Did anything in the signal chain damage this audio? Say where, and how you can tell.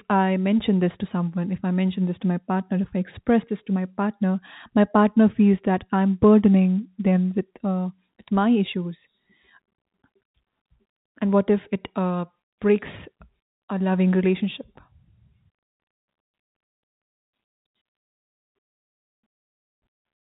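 No, nothing in the chain damaged this speech: the audio shows a normal telephone path, band-limited below 4 kHz as G.711 coding would be, which fits 64 kbps mu-law.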